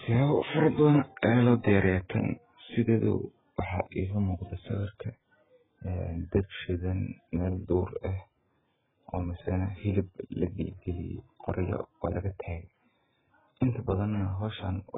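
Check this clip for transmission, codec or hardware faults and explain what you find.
One fault runs through the whole clip: AAC compression, likely AAC-LC at a very low bitrate, around 8 kbps. The starved encoder discards everything above 3.7 kHz and heavily damages the remaining spectrum, leaving the speech dull, smeared and warbling.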